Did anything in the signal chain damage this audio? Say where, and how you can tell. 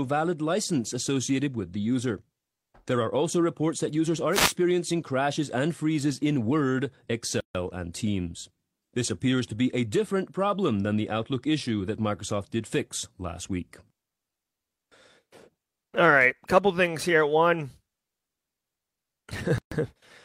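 Yes. At the wireless link ahead of the converter, a wireless microphone noise hit runs from 4.31 to 4.54 s: a short swish of static over the speech. The radio signal faded as reflections cancelled, so receiver noise rose.

At the codec stage there are two gaps at a join of encoded pieces: 7.40 to 7.55 s (145 ms) and 19.58 to 19.72 s (133 ms). The speech stops abruptly, smeared at the edges, then resumes where it left off. Separately encoded pieces were joined without trimming their encoder delay and end padding.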